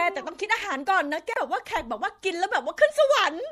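Throughout the speech, an encoder short of bits, likely MP3 compression at a rate fitting 64 kbps, has dropped weak detail, leaving a plainly watery, swirly sound. From 1.32 to 1.37 s, damaged data in the compressed stream knocks the decoder out of sync while it hunts for the next frame, producing a brief glitch.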